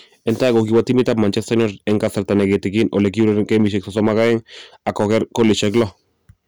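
Hard clipping runs through the whole speech clip. The signal is driven about 7 dB beyond what one stage can pass. Its loudest peaks are cut flat. Around two percent of samples hit that ceiling. The flat tops add high harmonics, heard as crackle on loud syllables.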